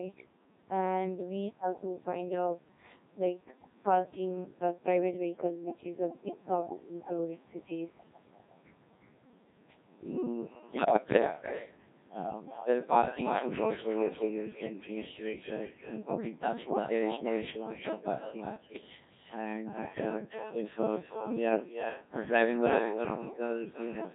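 Right from the start the whole thing runs through the Codec 2 vocoder, and heavily. It sounds like the very low-rate mode, something that fits 1.6 kbit/s. The decoder rebuilds the speech from pitch, voicing, level and a rough spectral shape using sine waves instead of keeping the waveform, so everything comes out buzzy and robotic.

On top of that there's echo with no canceller. Each phrase is trailed, roughly a third of a second later, by a copy at about 8 dB down. It's thinner, the sound of a far-end loudspeaker feeding straight back into a microphone with nothing removing it.

Then there are two bursts of bit errors on digital voice radio, from 10.67 to 11.22 s and from 18.56 to 18.81 s. Corrupted bits, a few percent of them, land in the vocoder's frame parameters, so the synthetic speech lurches in pitch, loudness and tone colour and breaks into warbly, bleepy gibberish until the stream recovers.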